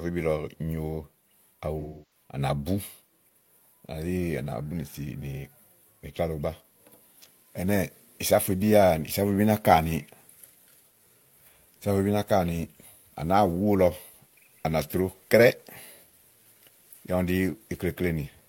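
At about 1.80 s the speech hits an AAC frame loss with concealment that runs until roughly 2.23 s. For about 300 ms, which fits something like seven dropped frames, the decoder had nothing new to play, so it kept reusing the last good spectrum. You hear the sound go smeared and a bit noisy until real frames return.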